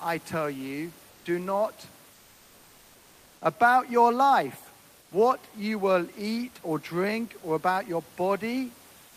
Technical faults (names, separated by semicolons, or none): comfort noise in place of the background